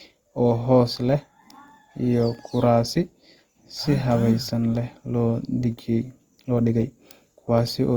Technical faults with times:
0.00-7.97 Opus compression

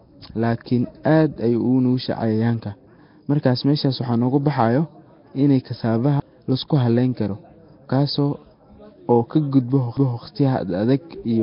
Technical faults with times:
0.00-11.43 Nellymoser compression
6.20 CD skip
9.97 CD skip

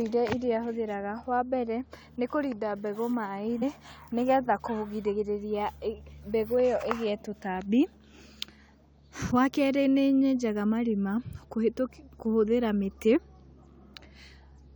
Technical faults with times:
3.61 damaged data in a compressed stream
9.30 damaged data in a compressed stream

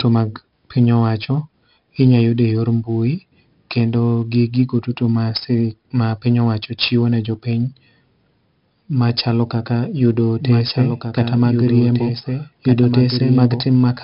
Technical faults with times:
0.00-14.04 4-bit ADPCM compression
10.40-14.04 doubled audio track

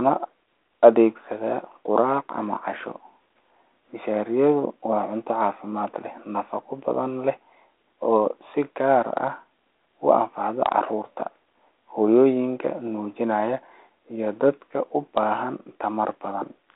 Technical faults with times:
none

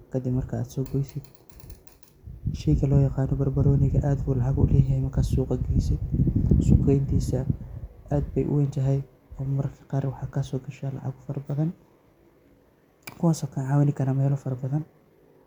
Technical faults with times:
none

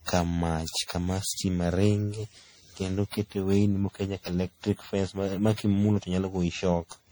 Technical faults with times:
0.00-7.11 generation loss

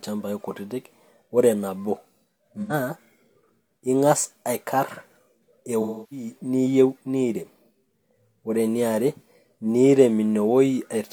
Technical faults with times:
2.61-2.73 AAC frame loss with concealment
5.81-6.26 AAC frame loss with concealment

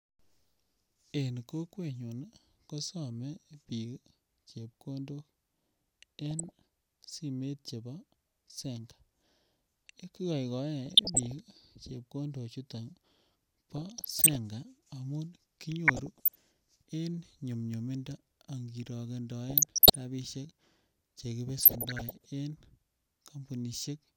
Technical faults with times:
6.31-6.52 DAB burbling
10.86-11.32 DAB burbling
13.77-14.36 DAB burbling
15.88-16.37 DAB burbling
19.49-19.95 DAB burbling
21.61-22.26 DAB burbling

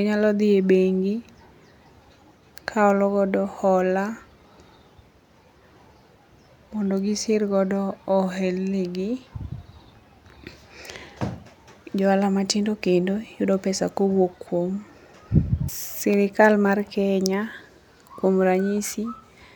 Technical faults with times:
none

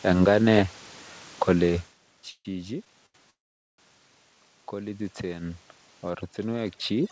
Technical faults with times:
2.30-2.47 call audio freeze
3.06-3.16 short stall from a late packet
3.30-3.80 call audio freeze
4.72-5.67 automatic gain rising
6.10-7.12 overdone noise removal

